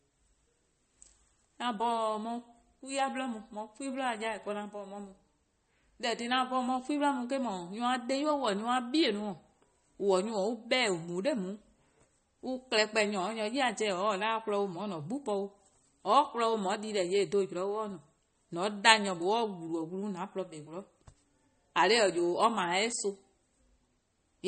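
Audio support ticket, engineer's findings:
Speech, whole clip. Watery, swirly texture, dull top end, metallic chirps on s sounds, smeared onsets. Likely MP3 compression, plainly audible. Encoder short of bits, fits about 32 kbps: treble cut at fixed frequency, weak frequency lines flickering frame to frame.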